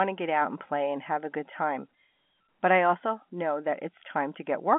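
Speech over a G.711 A-law telephone path at 64 kbps, band-limited to roughly 200 Hz to 3.4 kHz with nothing above 3.8 kHz, and no faults to report.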